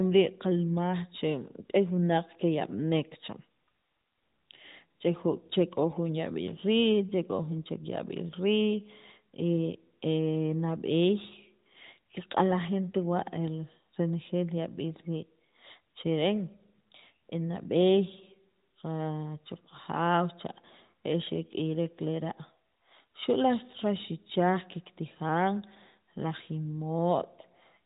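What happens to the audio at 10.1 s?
Nothing goes wrong at 10.1 s: the speech carries on intact through that moment, with the band-limited, narrowband character of the AMR mobile codec it passes through.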